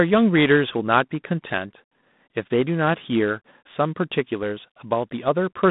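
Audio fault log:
throughout: G.726 ADPCM. The speech is confined to a telephone band of 150 Hz to 3.7 kHz, with nothing above 3.9 kHz. A harsh, rasping hiss rises and falls with the speech level rather than sitting steadily underneath, which fits coarse 24 kbit/s difference coding.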